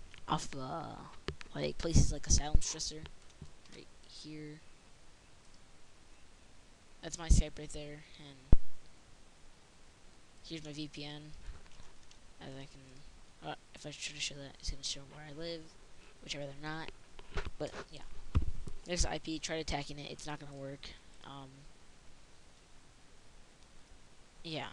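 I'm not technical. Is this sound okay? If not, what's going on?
No. At 2.55 s and again at 8.53 s there is a deep, brief thump, a phantom power thump: microphone power switched on or off on a live input.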